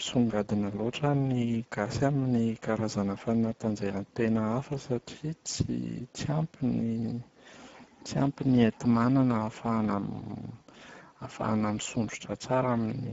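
Speech runs through the Speex codec for its whole length. The coding damage is plainly audible: too few bits for the excitation signal leave the voice noisy and hoarse. The sound stops sharply above 7.7 kHz, and the degradation fits a rate near 10 kbps.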